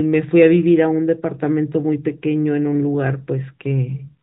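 Nothing in this speech stood out as a technical fault on listening.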